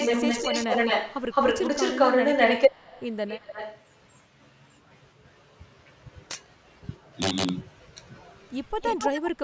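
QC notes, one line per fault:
0.00–3.07 s, 3.27–3.82 s and 8.81–9.31 s, echo leak: a delayed copy of the speech trails it by 213, 225 and 258 ms. It is slightly louder than the speech at first, well below it next, then about level. Likely a far-end loudspeaker whose echo canceller passed its own playback back.
6.31–6.35 s and 7.22–7.49 s, integer overflow: violent cracks on the loudest peaks, far sharper than ordinary clipping. Peaks pushed about 6 dB past the integer limit wrapped around to the opposite sign instead of being held at full scale.
9.12–9.17 s and 9.36–9.42 s, speech suppressed in double talk: the speech briefly dips around the last echo, slightly at first and then much more deeply, each time for under a tenth of a second. Likely the echo canceller, faced with both sides at once, turned the talker down too.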